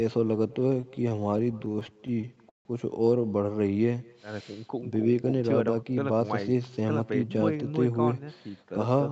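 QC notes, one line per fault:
Throughout, echo with no canceller: a faint copy, about 25 dB down, trails the speech by roughly a fifth of a second, picked up from the far loudspeaker and sent straight back.
0.53–2.67 s, repeated stalls (stutter): the jitter buffer kept running dry, so the receiver stretched the last sound across many short stalls, up to 0.16 s each. About 0.43 s was filled this way, roughly a fifth of the span, with nothing lost, so the speech drags.
5.24–6.45 s, jitter buffer speed-up: to shed excess buffered delay, short pitch-period slices totalling about a tenth of a second were cut, so the speech runs 108% fast at unchanged pitch and sounds hurried.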